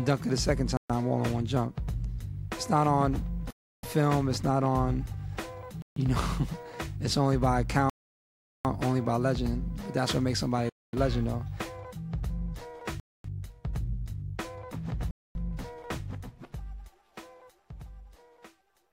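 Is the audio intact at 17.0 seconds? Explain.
Yes, the audio is intact at 17.0 seconds, with no dropout, click or other technical fault at that point.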